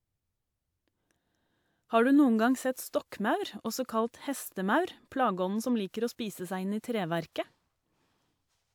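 No technical faults are audible anywhere in this recording.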